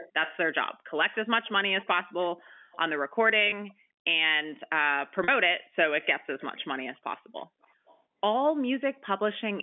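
Speech over a telephone line shows echo leak, a faint delayed copy of the talker at 0.00–0.37, 1.11–1.87, 2.41–2.78, 3.68–3.73, 6.02–6.06, 6.39–6.65, 7.62–8.00 and 9.39–9.62 s. The copy trails by about 380 ms early on and creeps to about 396 ms by the end. It sits roughly 15 to 35 dB below the speech. On a spectrogram it shows as ghostly, fainter repeats of the harmonic bands shifted right, and the likely cause is a loudspeaker on the far end whose echo canceller let part of its microphone pickup back into the call. Packet loss with pitch repetition appears at 3.50–3.52 s, a 20 ms gap that fits a single lost packet, and at 5.24–5.28 s, a 40 ms gap pointing to two. The receiver repeated the last pitch cycle to cover each gap, so you hear a brief buzzy hold. The waveform shows identical repeating periods tapering in level, and the spectrogram shows harmonics frozen flat for that instant. 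The G.711 telephone coding keeps everything within the 200 Hz to 3.4 kHz line band.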